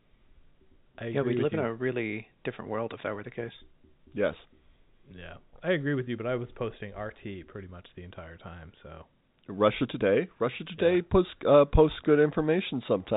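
Nothing in this speech goes wrong anywhere along the way; it simply carries the narrow, boxy band of G.711 telephone coding, with nothing coming through above about 3.8 kHz.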